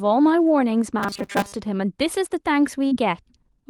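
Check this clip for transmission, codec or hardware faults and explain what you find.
Two transmission faults stand out in the speech.

From 0.99 to 1.53 s the voice turns into a rigid, metallic buzz at 200 Hz that only loosely tracks the speech. This is robotic sound from repeated short buffers. The likely cause is audio arriving too seldom, so the playback side loops its last fragment while most of the real signal in that stretch is skipped. A 200 Hz buzz fits a repeated slice about 5 ms long.

At 2.87 to 2.93 s there is a brief smear where the sound blurs for a moment before settling back. This is short concealed packet loss. About 40 ms of audio never reached the decoder in time, and the receiver covered 37 ms of the gap by extending the preceding sound, then crossfaded into the audio that arrived afterwards.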